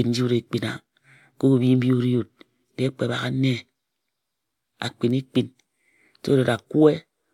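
No technical faults occur at any point in the recording, so there is nothing to describe in time order.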